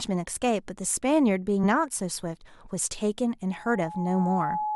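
At 1.63 s the speech jumps forward, showing compressed frames skipped: about two 20 ms frames, some 40 ms of audio, never reach the output. Unlike a dropout, there is no silent gap; the audio simply jumps ahead.

From 3.51 s to the end a loudspeaker feedback squeal takes over. The loop gain exceeds one at 848 Hz, so that single tone swells on its own over roughly a second until it is about as loud as the speech. That self-growth sets it apart from a steady hum.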